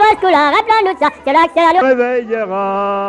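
From the start to 1.81 s the sound runs fast and bright, hurried by a factor of 1.5 and raised about 7 semitones. This is a wrong sample rate: playback outpaced recording with no conversion, which fits 16 kHz material played at 24 kHz.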